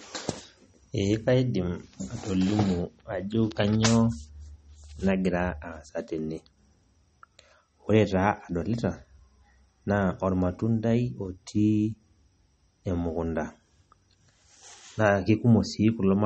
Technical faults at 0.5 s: MP3 compression

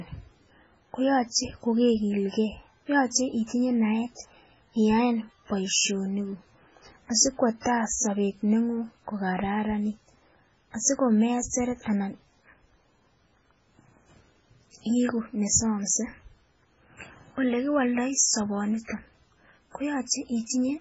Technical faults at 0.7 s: MP3 compression

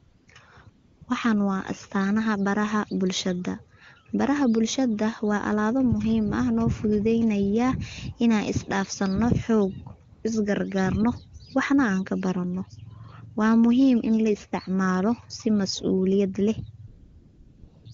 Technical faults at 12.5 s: none

